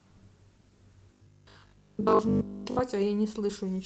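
From about 1.13 s to 2.81 s the speech turns into that robotic sound from repeated short buffers: a stiff, metallic buzz locked at 50 Hz that only loosely tracks what's being said. The likely cause is audio arriving too rarely, so the receiver keeps replaying its last chunk to fill the gap, and a 50 Hz buzz fits a 20 ms chunk. Most of that stretch is repeated material, with the real audio skipped. Underneath, the call codec's top end stops around 8 kHz.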